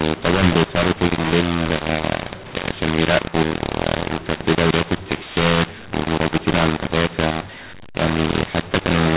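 From start to finish the speech carries a mu-law and A-law mix-up: telephone audio coded with mu-law is decoded as A-law, scrambling sample levels. Peaks sound harsh and gritty, pauses fill with hiss, and the waveform shows raised noise floor between phrases, all within a 4 kHz band that fits 8 kHz telephone coding.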